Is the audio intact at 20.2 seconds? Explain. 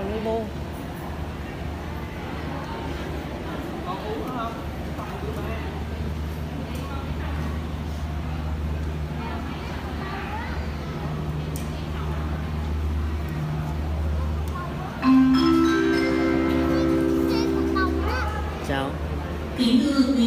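Yes, the audio at 20.2 seconds is intact, with no dropout, glitch or other fault at that moment.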